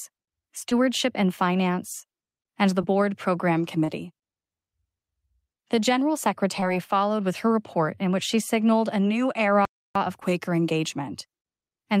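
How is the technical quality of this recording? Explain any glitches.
The recording has two kinds of glitch, both from how the audio was delivered rather than from the original sound.

At 0.69, 2.81, 3.84, 6.60 and 10.20 s there are brief smears or wobbles. These are short concealed packet loss: 20 to 40 ms of audio arrived too late, and the decoder patched each gap by extending the preceding sound.

At 9.65 s the sound stops dead for about 0.3 s and then resumes. This is a playback stall, likely caused by the player's buffer running dry or its thread being blocked.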